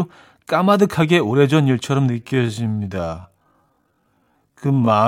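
From 2.08 s to the end, the speech abruptly slows to about half pace, 0.53 times speed, and drags. This is likely a time-stretched section that holds the pitch steady while lengthening the audio.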